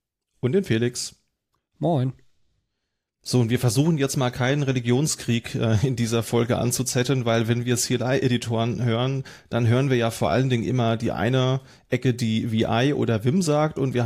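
No technical faults can be heard anywhere in this speech recording. There is nothing in it to mark with a time or explain.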